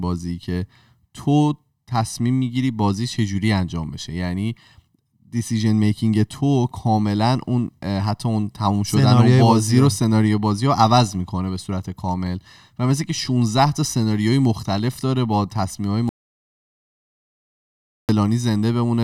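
An audio dropout to silence runs from 16.09 s to 18.09 s, removing about 2.0 s of the speech. The sound stops abruptly mid-flow and returns just as suddenly, and the gap between is silent, with no room tone or background hiss at all. That points to the input being lost, likely through a disconnected device, a broken link or an accidental mute, while the recorder kept writing silence, so whatever was said there is unrecoverable.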